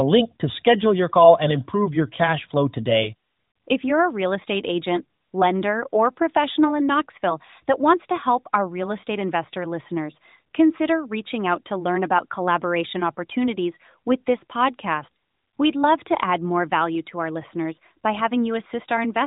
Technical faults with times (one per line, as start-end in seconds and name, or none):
none